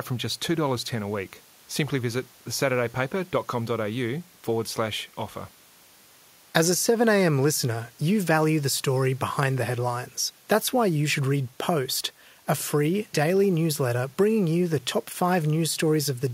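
No technical faults can be heard anywhere in the speech. There is nothing to mark at any point in the recording.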